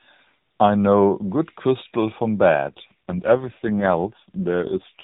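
From 2.68 s to the end, the speech turns rougher, buzzier and more synthetic, with no gap and no change in bandwidth. This is an AMR rate drop, where the codec switches to fewer bits for the speech itself. The sound fits a step down from 12.2 to 4.75 kbps within the narrowband AMR-NB link, which until then carries only light codec damage.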